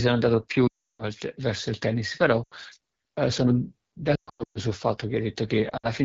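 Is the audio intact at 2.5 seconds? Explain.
No. From 2.44 to 2.54 s there is a run of lost AMR speech frames: about 80 ms of speech, which fits four consecutive 20 ms frames, failed to arrive intact. The decoder filled the gap by repeating the last good pitch and vocal tract settings while lowering the gain, so the sound there drops to near silence within two frames as the concealment runs out. Just after 2.54 s the speech resumes briefly weak or rough before settling.

That moment also sits under the AMR wideband (HD Voice) codec running at 8.85 kbit/s, one of its two lowest modes. At this rate the pulse-driven vocal tract model has too few bits for an accurate excitation, so the speech carries a plainly audible rough, raspy texture, and the band from 6.4 to 7 kHz is synthesised noise, not real signal.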